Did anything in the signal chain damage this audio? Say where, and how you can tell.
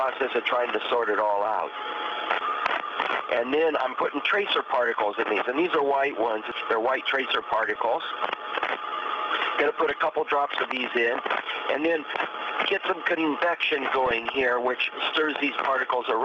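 Yes. The damage comes from the DAB reception and MP2 decoding stage, and it is DAB burbling. Short blips of noise in single sub-bands sit over the programme at 0.87 to 1.30 s, 7.36 to 7.76 s, 9.82 to 9.96 s and 14.06 to 14.50 s. Bit errors on the order of a few tenths of a percent slipped past error correction, corrupting samples, which put noise blips in single sub-bands.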